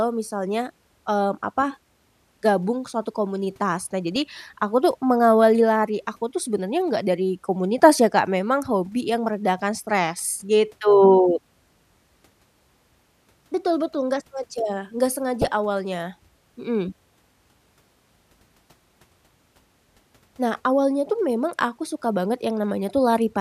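Weak DAB reception lets bit errors slip past error correction into the MP2 audio data, so corrupted samples put short noise blips into single sub-bands and corrupted scale factors make sub-bands jump in level for up to a frame. The result is DAB burbling across the speech: short bursts of noise blips from 4.12 to 4.22 s, then again just after "betul nggak sengaja nggak", from 15.41 to 15.48 s, which fits an error rate of a fraction of a percent.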